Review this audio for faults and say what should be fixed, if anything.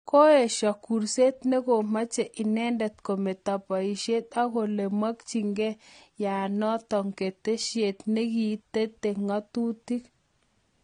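Throughout the speech, nothing is audible above about 9.7 kHz, and the remaining top end sounds dull and smeared, with a warbling, fizzy texture on sibilants and sustained sounds. The likely cause is AAC compression at a low bitrate, consistent with AAC-LC around 32 kbps. The encoder lowered its cut-off and quantised the spectrum coarsely, leaving holes that swirl. A simple low-pass filter would remove the highs cleanly, without that unstable texture in the band below the cut-off. To prevent it, encode at a higher bitrate or work from a lossless master.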